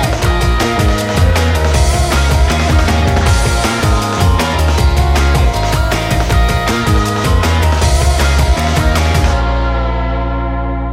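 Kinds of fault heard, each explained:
Stuck bit: from 5.68 to 6.80 s the sound turns harsh and buzzy, a gritty distortion riding on the waveform rather than sitting under it. The likely culprit is one data bit jammed at a fixed value, so roughly half the samples get knocked off by that bit's weight, here a step of about -35 dBFS. Because that bit flips along with the sign of small values, the quieter moments don't go clean but fill in with a noisy fizz too.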